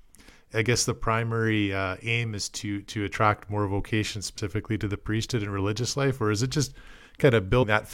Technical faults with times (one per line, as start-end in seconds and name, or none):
4.37 compressed frames skipped
7.62 compressed frames skipped